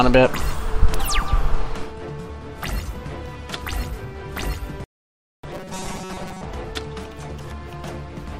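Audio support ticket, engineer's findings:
Robotic sound from repeated short buffers, 5.51–6.44 s: rigid 188 Hz buzz, likely underrun looping a 5.3 ms block. Spectrogram shows evenly spaced harmonics; waveform shows roughly repeated cycles.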